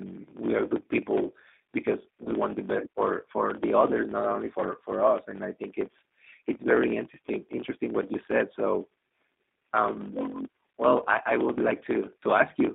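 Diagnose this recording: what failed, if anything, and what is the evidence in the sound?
The driver or buffer stage has a block size mismatch (truncated): one stage writes longer blocks than the next reads, and the tail of every block is discarded. Throughout the recording there is a steady buzz at about 45.9 Hz, the rate at which the cuts repeat. The speech runs 1.07 times fast at roughly normal pitch, because material is dropped rather than resampled. Those figures fit a 1024-sample write feeding a slightly shorter read.

At the codec stage, the G.729 codec (the G.729A form) has plainly audible damage across the whole clip. The line band runs only from 200 Hz to 3.7 kHz, so the speech is thin and boxy. Each 10 ms frame is rebuilt from a vocal-tract filter, a pitch predictor and a few pulses rather than from the waveform itself, which leaves the speech rough and faintly synthetic. The sound is consistent with an 8 kbit/s stream.

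On the network side, VoIP packet loss concealed by the speech codec occurs from 2.24 to 2.30 s, between "are good people because" and "want the best for". The decoder had no data, so it extended its last pitch and filter state with falling gain, producing a brief stretched, fading patch. The concealment spans about 60 ms, longer than the gap itself, because the decoder needs a few frames to recover. The audio fits a single lost 20 ms packet.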